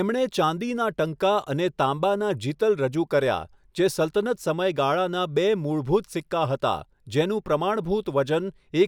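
No audible technical fault turns up anywhere in this recording of speech.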